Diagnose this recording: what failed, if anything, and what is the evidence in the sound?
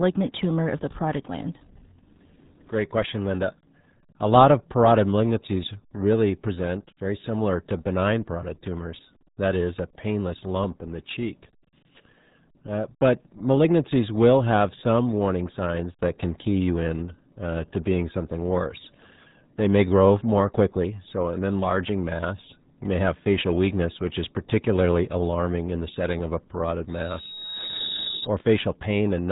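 The codec stage failed throughout. This speech is carried by the RealAudio 14.4 codec, a low-rate dial-up speech coder. Nothing survives above 3.9 kHz, so consonants lose their edge. The damage is heavy: the voice sounds muffled and gargly from start to finish. That fits a bitrate around 8 kbit/s. The coder models speech coarsely and discards most spectral detail to fit the channel.

A loudspeaker feedback squeal enters at 26.88 s, just after "setting of a parotid". It lasts until 28.28 s. The fault sits in the acoustic path, where the microphone picks up its own loudspeaker. A single tone at 3.8 kHz swells over roughly a second. It peaks at about the same level as the speech. At that frequency the loop gain exceeded one, so the tone fed itself and grew.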